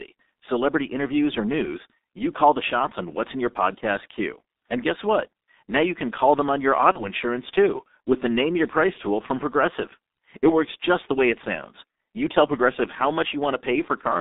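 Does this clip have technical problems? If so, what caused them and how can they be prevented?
Yes. The whole speech clip runs through the G.723.1 codec, and damage is heavy. The band stops around 250 Hz at the bottom and 3.7 kHz at the top, so it sounds muffled and thin. The codec rebuilds speech from a coarse, slowly updated model in 30 ms frames, which fits a rate around 6.3 kbit/s. That's why consonants smear and the voice comes out hoarse. To prevent it, use a wideband codec like Opus or G.722 at a decent bitrate.

There are two spots of VoIP packet loss concealed by the speech codec, at 6.92 to 7.09 s and at 8.93 to 8.99 s. Each fits a single lost 30 ms frame. The decoder fills the hole by stretching its last pitch and filter and fading the gain, so you hear a brief stretched-out sound that fades. Because each frame leans on the previous one, the voice stays weak or distorted after the gap, noticeably longer at 6.92 s. 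To prevent it, use a steadier network path with QoS, a properly sized jitter buffer, and forward error correction.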